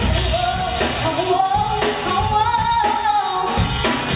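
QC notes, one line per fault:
Nothing stood out on listening to this clip, which came through a WebRTC call path with its sound band ending at about 4 kHz.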